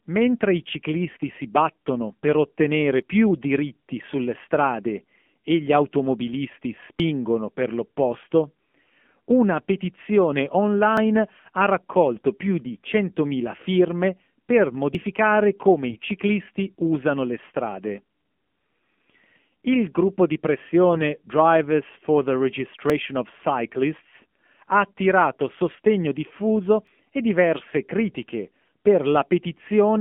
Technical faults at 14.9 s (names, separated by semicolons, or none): AMR narrowband mobile codec; audio missing between chunks